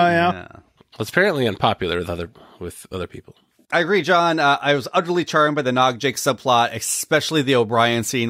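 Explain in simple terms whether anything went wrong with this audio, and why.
From 5.82 s, right after "utterly charmed by the", pre-emphasis is left on: the treble boost was never undone, so the audio turns thin and hissy until the end.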